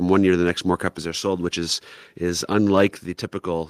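At 1.02 s, between "to the next more" and "are sold which is", the speech and the background beneath it drop together by about 4 dB in a single step, and the level stays down. The same drop of about 4 dB recurs at 3.06 s. This is most likely a microphone volume stepped down by the call software lowering the input gain. Unlike a compressor or noise suppressor, there is no gradual pumping or recovery, just one abrupt step that affects everything equally.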